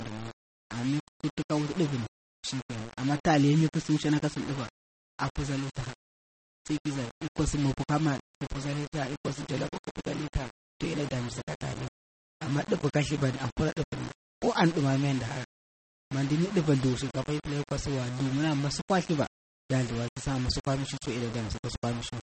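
The speech was likely reduced to very few bits by rounding without dither, which fits a 5-bit word length, and this low bit depth without dither leaves a quantisation error only about 15 dB below the signal that tracks the voice, so every phrase carries a rough grainy fizz and quiet tails break up or sputter. It was also likely squeezed through MP3 compression at a low rate, which fits 32 kbps. The encoder has cut everything above 8.4 kHz, so the sound is dull, and the remaining detail swirls and warbles throughout, with smeared attacks and metallic edges on sibilants.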